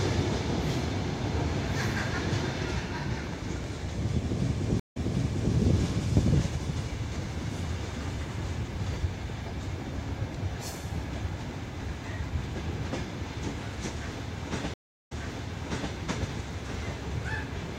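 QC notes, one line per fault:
4.80–5.54 s and 14.74–15.93 s, stream reconnect: the audio stops for 147 ms and then 356 ms, and each time it comes back from a point already heard, about 0.60 s and then 0.84 s earlier, easing in from quiet as a fresh decoder starts mid-stream. Unlike a plain dropout, which skips ahead or just leaves a hole, this repeats material after the gap, consistent with the server resending a burst on reconnection.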